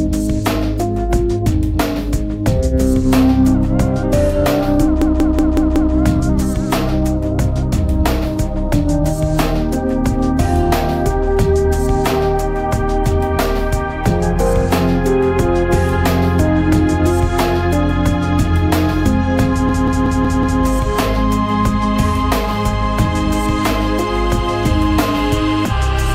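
From 5.02 to 5.94 s and again from 19.69 to 20.62 s, a system hang loop replays one 186 ms slice of sound five times, a machine-gun stutter at 5.38 Hz. The repeat length fits an 8192-sample ring buffer cycling while the host stalled.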